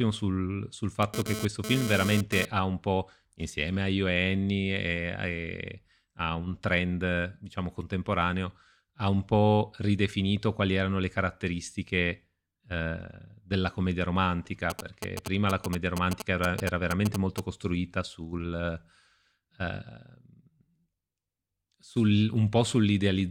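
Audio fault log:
1.03–2.45 s, GSM phone buzz: A hard, raspy buzz sits about 6 dB below the speech. Its fundamental is near 217 Hz and it carries a dense stack of harmonics unrelated to anything in the speech. A nearby 2G handset was transmitting in bursts at that rate, and the audio circuitry rectified the radio pulses into audible energy. Because the handset was moving data rather than holding a call, the buzz comes and goes instead of droning steadily.
14.70–17.40 s, GSM signalling bursts: A galloping dit-dit-dit pattern of short buzzes appears, each buzz pitched at the same 217 Hz burst rate and sitting not far below the speech level. The pattern is typical of a 2G handset sending only brief groups of radio bursts while it signals to the network. The audio path demodulates those groups into short bursts of buzz, which gives the broken, rhythmic texture.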